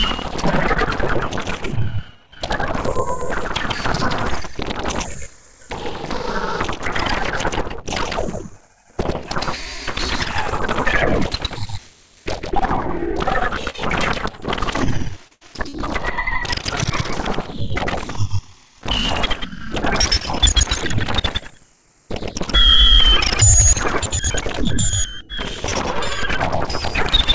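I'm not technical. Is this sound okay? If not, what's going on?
No, there are a few small glitches from the call connection. You'll hear short concealed packet loss at 13.70, 15.28 and 15.69 seconds: about 40 milliseconds each went missing, and the receiver papered over the hole by stretching the sound just before it, so you get a quick smear or wobble.

Right after the second one, from 15.33 to 15.43 seconds, there's a burst of packet loss. About 80 milliseconds never arrived, so the sound briefly hangs or fades to a hiss, then jumps ahead with that bit gone. The call codec also trims everything above 8 kHz, which takes a little sparkle off the top.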